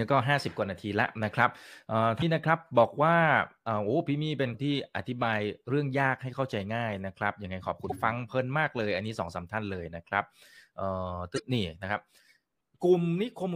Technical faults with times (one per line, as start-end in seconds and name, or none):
2.18-2.22 damaged data in a compressed stream
4.51-4.55 damaged data in a compressed stream
7.88-7.92 damaged data in a compressed stream
11.35-11.40 damaged data in a compressed stream